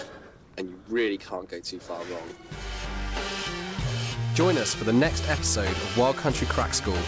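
The audio shows no technical faults, and it has the band-limited character of a call passed through a wideband codec, with nothing above about 8 kHz, which fits G.722 at 64 kbps.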